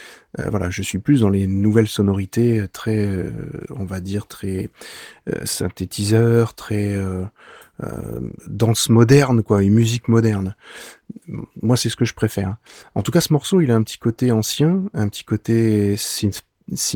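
No technical faults can be heard in this speech recording; the signal stays steady and intact throughout.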